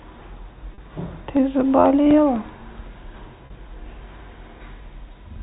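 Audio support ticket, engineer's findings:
Packet loss with pitch repetition at 0.74 s and again at 3.46 s. Each gap lasts about 40 ms, which fits two 20 ms packets dropped back to back. Symptom: a brief held, buzzy tone where the speech should continue. Component: receiver-side loss concealment. Mechanism: the decoder loops the last pitch period to fill the hole, then hands back to live audio. Gaps are short, so the repetition never fades to silence. Upstream band limit below 4 kHz is consistent with G.711 A-law at 64 kbps.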